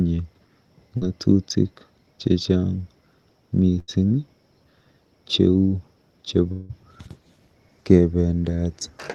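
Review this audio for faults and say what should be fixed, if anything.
A brief smear around 0.97 to 1.03 s is short concealed packet loss: about 40 ms never arrived, and the receiver stretched the preceding sound to bridge it. Smoothing network delay with a slightly deeper jitter buffer would prevent it.

Around 3.79 to 3.90 s the last sound is held and fades out before the sound resumes further on. This burst of packet loss dropped about 80 ms, which the receiver filled by continuing and attenuating the last sound. Adding forward error correction in the codec would recover such runs of lost packets.

From 6.52 to 6.71 s the sound stretches into a fading tail and comes back with a gap of about 180 ms. This is likely a long network dropout, with no audio arriving and concealment bridging the hole. A more stable connection or redundant transmission would prevent it.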